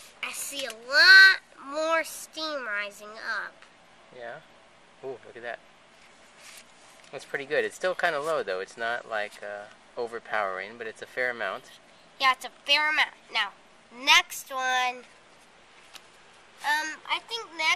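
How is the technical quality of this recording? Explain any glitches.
The technical quality is poor: the whole recording carries plainly audible MP2 compression damage, from start to finish. The sound is dull, with a gurgling, granular roughness, and the coarseness points to a low bitrate of roughly 80 kbps. This is likely caused by MPEG Layer II encoding starved of bits, so it switches off upper sub-bands and quantises the rest crudely. On a spectrogram, high-frequency energy would appear blocky and flickering, with bands dropping in and out.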